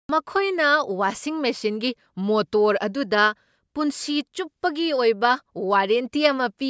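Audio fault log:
Nothing to flag here; the speech comes through without any faults worth noting.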